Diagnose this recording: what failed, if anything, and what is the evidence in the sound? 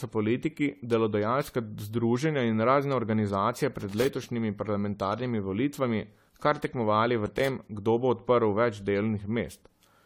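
Codec stage. Throughout this speech the sound is swirly, smeared and hollow, and consonant attacks blur. Nothing is present above 18.9 kHz. The texture is worse than a single encode would leave. This is likely generation loss from repeated AAC-LC encoding, about five passes, at a rate consistent with 64 kbit/s. Each pass requantises on a shifted frame grid. The noise and spectral holes stack up instead of staying fixed.

Analogue wiring stage. Irregular bursts of scratchy crackle cut into the signal twice. The first runs from 3.80 to 4.07 s, after "združenja in razne organizacije" and before "parlamentarnimi volitvami kar tekmovali". The second runs from 7.26 to 7.49 s, after "parlamentarnimi volitvami kar tekmovali" and before "kdo bo odprl več". This is loose connector crackle. A worn or dirty contact is rapidly breaking and remaking the circuit, which chops the audio into short fragments.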